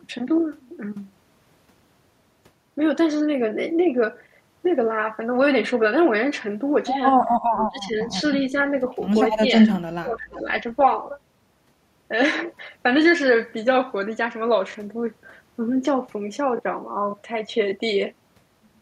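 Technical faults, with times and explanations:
7.53–7.99 s, 9.63–9.69 s, 9.99–10.48 s: speech suppressed in double talk. The voice ducks by up to about 20–25 dB (only slightly at 9.6 s) rather than cutting to silence, likely from the echo canceller muting during overlapping talk.
10.32–10.42 s: echo leak. A faint, separate copy of the voice returns about 350 ms late, roughly 25 dB down, likely residual loudspeaker echo. It sounds distinct from room reverb.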